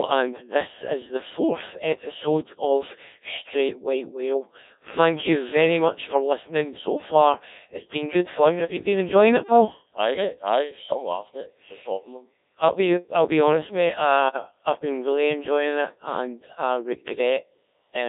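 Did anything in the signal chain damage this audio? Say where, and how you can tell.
Yes. At the codec stage, the whole clip carries Codec 2 vocoder damage: the speech is resynthesised from pitch, voicing and spectral-envelope parameters at around 1.3 kbit/s, so the waveform is gone and the voice sounds buzzy and robotic, confined to roughly 300 Hz to 3.7 kHz.

On the radio link, bit errors on digital voice radio hit one frame from 14.29 to 14.36 s, between "I'll be honest mate" and "I've been really enjoying". Corrupted parameter bits make that frame jump in pitch and tone, producing a brief warbling bleep.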